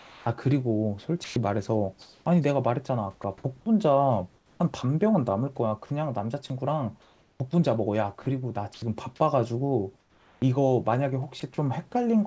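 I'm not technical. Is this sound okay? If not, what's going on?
No. From 0 to 11.42 s the speech keeps cutting out, with 1.94 s replaced by soft fake hiss. The likely cause is sound chopped by the voice detector.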